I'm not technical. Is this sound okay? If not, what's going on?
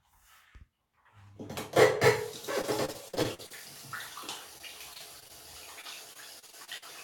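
No. The audio has repeated packet loss, which gives it a robotic sound. Small chunks of the sound went missing in transmission, again and again, from 2.61 to 3.52 s, 4.58 to 5.31 s and 5.81 to 6.84 s. Each time, the system patched the hole by stretching out the last bit it had, for up to about 46 ms. Those quick cut-and-patch cycles make the sound choppy during those stretches.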